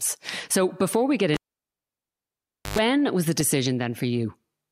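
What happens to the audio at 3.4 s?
At 3.40 s, just after "was the", a corrupt frame decoded: flipped bits misplace energy, giving a brief chirp, squeak, blip or burst of noise peaking around -20 dBFS, seen as a thin vertical spectrogram streak and waveform spike.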